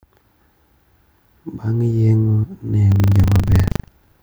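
From 2.88 s to 4.21 s the speech takes on a steady robotic rattle at 25 Hz: buffer tearing. The writer and the hardware reader of the ring buffer have drifted so they cross within each 40 ms period. About a tenth of every buffer replays audio from roughly 150 ms earlier, with hard joins on both sides. Unlike clicks from dropouts, which leave gaps, this stays a regular buzz locked to the buffer rate and sounds only while speech is present.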